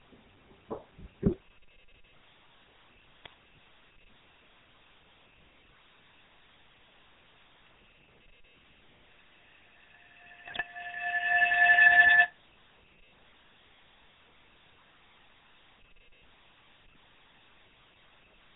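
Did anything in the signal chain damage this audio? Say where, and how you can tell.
Yes. The codec stage left its mark across the whole 18-second clip. This is GSM full-rate coding, plainly audible: nothing above 4 kHz, and a buzzy, gravelly roughness from the regular-pulse excitation. That sound fits the 13 kbps full-rate codec, which rebuilds speech through a vocal-tract model.

The network hit it too, with GSM bit errors at 1.26–1.35 s, 3.25–3.28 s and 10.46–10.63 s. You hear squawks, pops and gargling over short stretches. Corrupted filter, pitch or gain parameters bent the spectrum or spiked the level for a few frames each time.

At the call-processing and room level there's a feedback howl from 8.55 to 12.38 s. It's a tone around 2 kHz, peaking about 16 dB above the speech, with the loop repeating roughly every 0.3 s. Two devices on the same call kept recirculating the sound through mic and speaker, so it grew on every pass.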